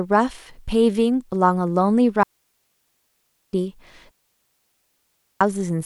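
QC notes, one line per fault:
2.23–3.53 s and 4.11–5.41 s, digital wireless dropout: the speech cuts to near silence for 1.3 s each time, with a very quick fade and no noise burst on either side. The receiver lost too much of the digital stream and muted rather than play corrupted data.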